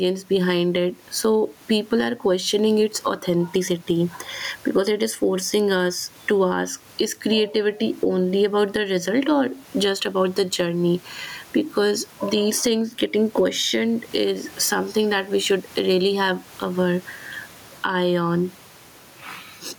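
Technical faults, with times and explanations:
Throughout, gain pumping: the level keeps breathing, with the gain pulled down on each loud sound by something like 15 dB. The room noise itself sits about 37 dB below the speech. Loud and soft syllables end up squashed close together. The likely cause is mic gain set far too high, with a fast limiter or compressor clamping down on every loud moment.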